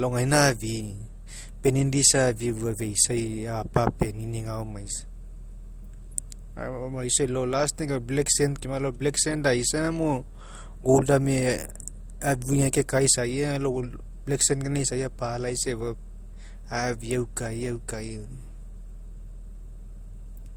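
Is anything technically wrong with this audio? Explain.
Yes. Throughout the speech, two distinct kinds of coding artefacts sit on top of each other. The likely cause is transcoding between lossy codecs, which fits MP3 at 64 kbit/s followed by Opus at 32 kbit/s. The second encoder wastes bits reproducing the first one's damage, so both sets of artefacts remain audible. Content still reaches about 20.1 kHz.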